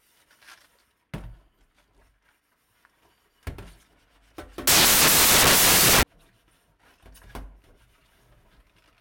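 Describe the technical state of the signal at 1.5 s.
At 1.5 s the signal is intact, with no dropout, clipping, glitch or other fault audible at that point.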